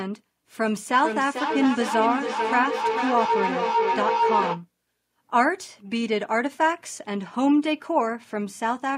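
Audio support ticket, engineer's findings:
Growing whine near 1 kHz, pulsing roughly every 0.4 s, 0.71–4.66 s, peaking about 1 dB under speech. Feedback howl: co-located endpoints, mic-speaker loop gaining per pass.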